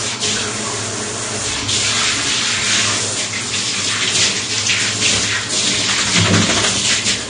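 From start to finish, nothing is heard above 9.7 kHz, and the audio sounds dull and smeared. The damage is plainly audible. The likely cause is AAC compression, AAC-LC, at a bitrate that points to roughly 32 kbps. The encoder discarded the upper band and coarsely quantised the rest.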